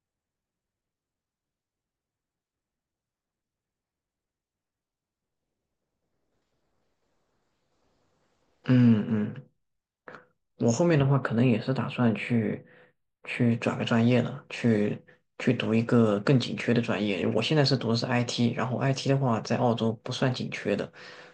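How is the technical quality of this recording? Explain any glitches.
The recording has one glitch, from about 11.0 to 13.5 s: channel delay (comb filtering). One channel runs a few samples behind the other, a gap under a tenth of a millisecond, and when the two are summed to mono the shared signal cancels at evenly spaced frequencies, the first around 7 kHz. The speech turns briefly hollow and phasey at the top. Unlike a steady low-pass roll-off, the loss comes from fixed notches rather than a smooth slope, and unlike flanging those notches don't sweep.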